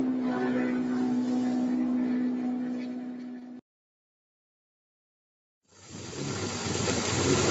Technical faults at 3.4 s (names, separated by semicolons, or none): noise suppressor applied to music or sounds; short concealed packet loss